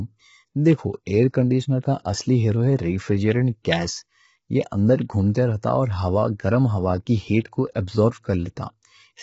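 Low-delay AAC compression runs through the whole clip. The speech sounds rough and grainy, with a noisy haze between the pitch harmonics and nothing above 7.7 kHz. The likely cause is a low-delay AAC codec such as AAC-ELD, with damage heavy enough to suggest a bitrate around 16 kbps. Its very short frames cannot separate closely spaced harmonics well, and at so few bits the encoder fills the gaps with noise and drops the top band.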